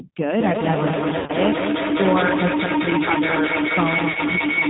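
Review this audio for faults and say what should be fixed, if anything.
The G.729 codec colours the whole clip. It rebuilds the speech at 8 kbit/s from a vocal tract filter, a pitch predictor and a few pulses per frame. Nothing above 4 kHz survives, and the speech sounds rough and synthetic. To prevent it, negotiate a wideband codec such as Opus instead.

Feedback echo between two devices runs from 0.39 s to the end. Each phrase returns about every fifth of a second, thinner and ringing. The repeats build up, peaking about 2 dB above the speech itself. A second device in the room is replaying this call into the microphone. That echo canceller cannot remove sound it did not play. To prevent it, mute or disconnect the second device in the same room.

VoIP packet loss concealed by the speech codec happens at 1.19 to 1.33 s. About 90 ms went missing across 100 ms, with one 70 ms gap. The decoder stretched its last pitch and filter into a fading buzzy tone or coloured noise. 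A shorter 30 ms dropout follows at 4.12 to 4.18 s. The speech stays weak briefly after each. To prevent it, fix the network path and add a jitter buffer or forward error correction.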